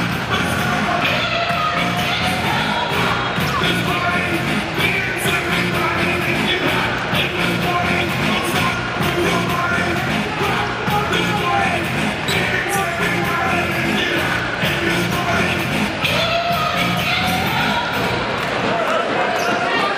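No technical faults can be heard anywhere in this audio.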